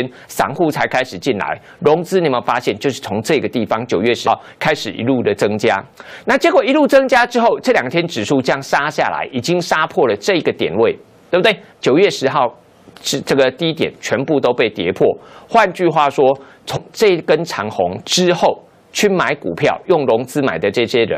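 At 4.26 s and 16.75 s compressed frames get skipped: the audio leaps ahead about 70 ms, then about 150 ms, each leaving a brief glitch at the join.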